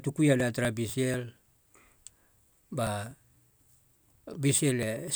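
A background task blocking the USB bus or audio driver every 0.246 s causes periodic USB or driver dropouts in this speech recording. From 0.16 to 5.08 s, around twenty gaps of roughly 4 ms are skipped outright, heard as regular ticks during the speech.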